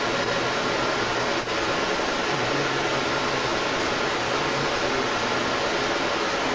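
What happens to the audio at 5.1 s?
At 5.1 s, an echo leak that runs through the whole clip (0 to 6.55 s) is audible. The likely cause is an echo canceller passing its loudspeaker pickup back, so a copy of the speech returns 255 ms late, around 10 dB stronger than the direct speech.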